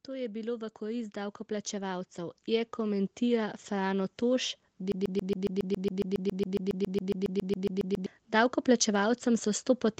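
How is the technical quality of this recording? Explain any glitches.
The recording has two clear faults: a slow gain swell over the first four seconds and a stuck repeating fragment through most of the second half. The audio has nothing above 8 kHz, which fits a wideband call codec such as Opus.

Automatic gain rising, from 0.06 s to 4.23 s: the level climbs steadily by about 13 dB. The automatic gain control judged the input too quiet and raised its gain gradually, so the speech and the background noise swell together. There is no sudden step, just a ramp over roughly four seconds.

Broken-record loop, from 4.92 s to 8.06 s: a 138 ms fragment repeats back to back 23 times, producing a rapid, mechanical stutter at roughly seven repeats per second. The likely cause is a stall in the player, encoder or stream, which kept resending the last fragment it held. Every repeat is identical, and the speech that should have played during those three seconds is lost.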